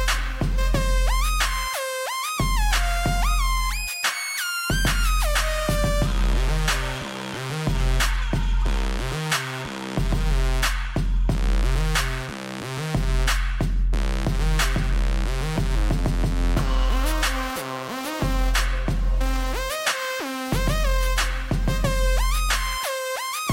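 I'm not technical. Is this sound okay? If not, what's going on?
Yes, this sound is okay. Nothing in it points to a technical problem.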